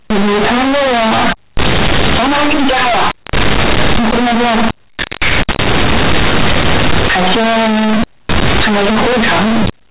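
Speech, heard throughout as extremely loud, harsh, buzzy distortion, with strong noise filling every pause. This is companded audio read as linear: mu-law bytes are played as plain 8-bit samples without expansion, so quiet passages swing as wide as loud ones. The telephone band itself, G.711 mu-law at 8,000 samples a second with nothing above 4 kHz, is the underlying coding.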